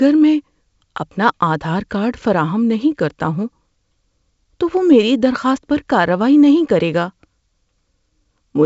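A speech recording carried over G.722 wideband telephone coding, with nothing technically wrong to point to.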